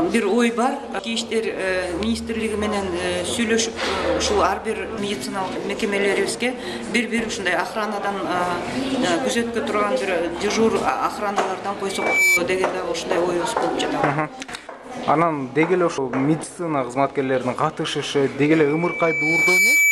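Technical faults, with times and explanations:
11.88 to 12.41 s and 18.42 to 19.92 s, loudspeaker feedback squeal: a single steady tone at 2.3 kHz swells up over the rest of the sound, reaching about 5 dB above it. The microphone is hearing the loudspeaker it drives, and at 2.3 kHz the loop gain tops one, so that tone feeds itself and grows. The first squeal builds in under half a second and then stops. The second builds over about a second and lasts until the clip ends.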